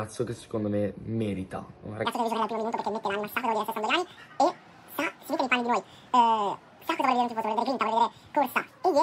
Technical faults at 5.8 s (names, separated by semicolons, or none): wrong sample rate